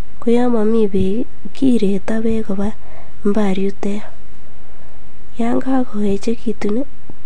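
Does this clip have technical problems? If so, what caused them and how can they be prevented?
Yes. Repeated frames at 2.87 to 2.89 s: one 23.2 ms compressed block, which fits a 1024-sample frame at 44.1 kHz, plays twice, giving a brief stutter. Prevent it by deduplicating frames by sequence number or timestamp before decoding.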